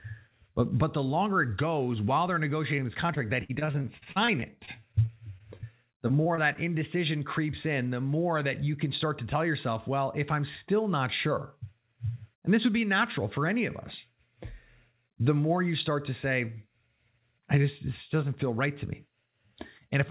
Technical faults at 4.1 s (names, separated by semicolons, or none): repeated packet loss (robotic sound)